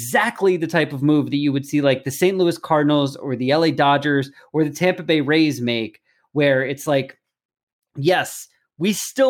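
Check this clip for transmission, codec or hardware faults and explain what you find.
Nothing stood out on listening to this speech recording.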